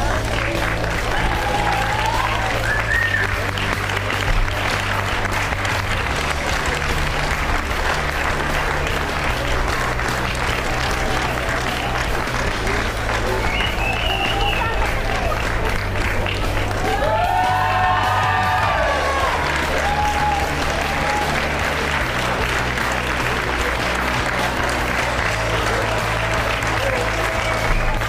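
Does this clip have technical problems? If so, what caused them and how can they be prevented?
No, this clip has no technical problems, so there is nothing to trace back or prevent.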